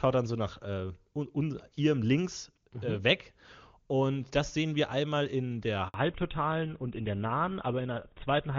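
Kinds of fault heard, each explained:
Handover gap: The call switched networks, and no speech frames arrived during the change. Just after "sehen wir einmal in", the sound drops out from 5.88 to 5.94 s. That is a 60 ms silence, and whatever fell in it is lost.
Fallback to narrowband: Right after the gap, at 5.94 s, the call falls back from HD Voice to an older narrowband codec. Before this, the sound is clean wideband that fits AMR-WB at 23.85 kbit/s. From here on, nothing above 4 kHz remains, and the speech sounds duller, which fits GSM full rate at 13 kbit/s.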